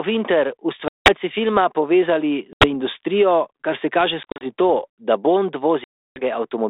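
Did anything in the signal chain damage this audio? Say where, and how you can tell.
Yes, the network stage: packet loss on an ADPCM call, with hard-edged silent gaps at 0.88–1.13 s, 2.53–2.67 s, 4.23–4.46 s (after "kar se kaže", several short dropouts up to 40 ms) and 5.84–6.22 s. On a spectrogram these show as blank vertical columns, and on the waveform as flat holes. After each gap the decoder's adaptive predictor and step size no longer match the sender's, so the sound returns slightly distorted.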